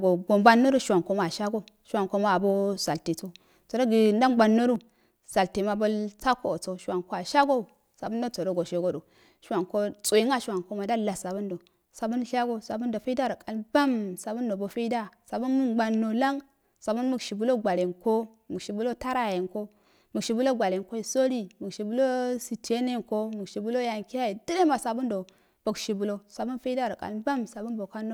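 Speech with one repeated buffer at 11.23 s, between "wanko ma ndalwa" and "du sabun shago sabundo": a short piece, about 5.3 ms, played twice more, giving a brief buzz-like click.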